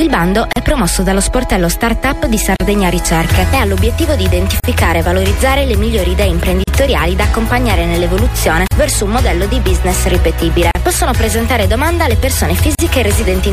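Separately encoded pieces were joined without trimming each encoder's start-up delay and final-frame padding, leaving a gap at a join of encoded pieces roughly every 2 s, at 0.53, 2.56, 4.60, 6.64, 8.68, 10.71 and 12.75 s. Each is a 35 to 38 ms gap with smeared edges, after which the sound resumes where it stopped.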